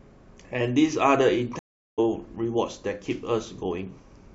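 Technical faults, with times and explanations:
1.59 to 1.99 s, stream reconnect: the speech cuts to silence for about 0.39 s, then resumes at a point roughly 0.3 s further on, so a short stretch of the talk is skipped rather than delayed. The connection dropped, the player fell silent while it reconnected, and it started a fresh decoder partway through the live stream. The audio that played out during the outage was never delivered, which leaves both the gap and the jump ahead.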